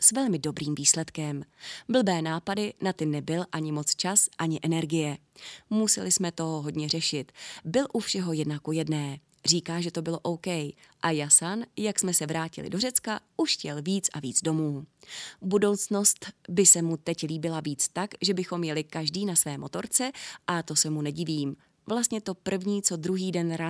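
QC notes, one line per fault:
No faults found in this speech recording. Nothing here needs a QC entry.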